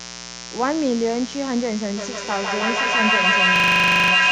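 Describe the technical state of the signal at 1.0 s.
At 1.0 s the speech sits on top of mains buzz that runs through the whole clip, only around 10 dB below the speech. Sharp switching spikes from the 60 Hz supply leak in twice per cycle, 120 times a second, giving a steady, raspy buzz. A spectrogram would show evenly spaced horizontal lines at multiples of 60 Hz, stacking up into several kHz. The waveform would carry spiky pulses about 8.3 ms apart.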